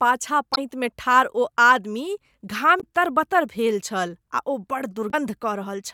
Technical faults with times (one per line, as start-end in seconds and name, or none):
0.52-0.58 damaged data in a compressed stream
2.77-2.84 damaged data in a compressed stream
5.08-5.14 damaged data in a compressed stream